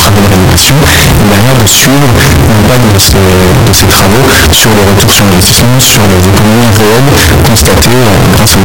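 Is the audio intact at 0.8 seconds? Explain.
No. At 0.8 seconds, as throughout, the speech is blasted into a harsh, near-square wave at an almost fixed, high level, with background noise as loud as the voice. That is likely float read as integer, with 32-bit float samples taken as 32-bit integers. Unlike ordinary clipping, quiet passages are just as loud, yet the pitch survives.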